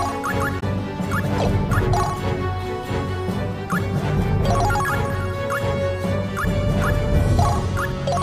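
Near the start, at 0.56 s, a short stretch of the compressed stream arrives corrupted, with bytes lost or overwritten, and the decoder can no longer parse the frames there. It loses frame sync and hunts forward for the next valid header before normal decoding resumes at 0.63 s. The listener hears this damaged data in a compressed stream as a sudden 70 ms chirp or squawk of garbled sound that breaks abruptly into the audio.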